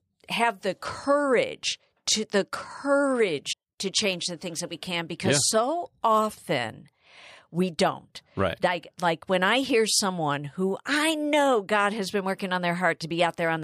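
At 3.52 to 3.54 s the speech skips ahead abruptly, with a brief glitch lasting about 20 ms before decoding settles. The likely cause is a broken MP3 bit reservoir: with MP3 frames of 26.1 ms, a frame near this point appears to have gone missing, so the following frame reached back for reservoir data and decoded bytes belonging to a different frame, producing the jump and the short glitch.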